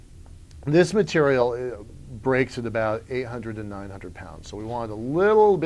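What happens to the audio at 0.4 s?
Nothing goes wrong at 0.4 s; the audio plays through that moment intact, with no dropout, click or other fault.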